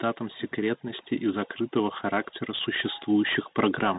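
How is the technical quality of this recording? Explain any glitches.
The technical quality is poor: the recording is narrowband and grainy from start to finish, it gets gradually louder through most of its length, and it has one brief dropout near the end.

Bluetooth CVSD headset codec, throughout: The speech crossed a headset link that codes each sample as a single up-or-down bit with an adapting step size, which fits CVSD's 64 kHz one-bit stream. Nothing above 4 kHz survives, so the speech sounds muffled and telephone-like. Loud, bright sounds move faster than the step can follow and distort, s sounds come out scratchy, and a granular hiss sits under everything. The damage is plainly audible.

Automatic gain rising, 0.55 to 3.38 s: The automatic gain control judged the input too quiet and slowly raised its gain by about 6 dB over nearly three seconds. Because this happens after the microphone, the speech and the background noise swell together. 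The level creeps upward instead of jumping.

Unconcealed Bluetooth headset packet loss, 3.03 to 3.07 s: A single voice packet between headset and phone was lost, and about 7.5 ms of audio was replaced by silence or an idle pattern with no attempt to hide the gap. The result is a tiny hole with hard edges that can click. On this CVSD link the speech then returns briefly quieter while the step size adapts back up.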